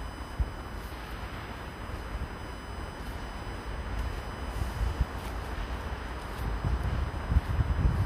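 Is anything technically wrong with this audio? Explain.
Yes. A USB whine runs throughout the clip. The USB bus's current draw in 1 ms frames leaks into the audio through the power or ground, producing a steady fixed-pitch whine at 1 kHz with harmonics, strongest at 3 kHz, sitting about 25 dB below the sound.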